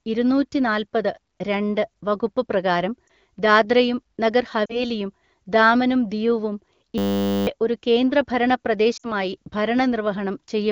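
At 3.07 s, just after "ഇരുന്നൂറ്റിനാല്പത് രണ്ട് വകുപ്പ് പ്രകാരം", a single lost AMR speech frame is concealed. The brief dip shows as a small notch in the waveform envelope.

At 4.65 to 4.84 s, after "വകുപ്പ് പ്രകാരം ദാദ്രയും നഗർ", there is another concealed loss of about 40 ms.

From 6.98 to 7.47 s, between "ദാമനും ദിയുവും" and "ഒരു കേന്ദ്രഭരണ", a system hang loop repeats one 10 ms piece 49 times. This produces a steady 100 Hz buzz, and the spectrogram shows evenly spaced horizontal harmonic lines.

At 8.97 to 9.12 s, a 60 ms frame loss makes the sound drop to near silence within two frames. The spectrogram shows the energy falling away quickly.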